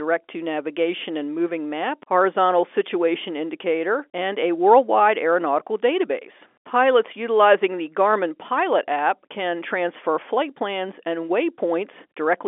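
No faults found; the speech sits in the normal G.711 telephone band of 300 Hz to 3.5 kHz, with nothing above 3.7 kHz.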